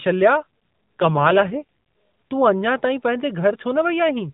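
From 0.40 to 1.63 s the speech turns rougher and more buzzy-synthetic while staying in the same narrow telephone band with no gap. This is an AMR rate drop, which fits the codec stepping down from 12.2 to about 5.9 kbps before recovering.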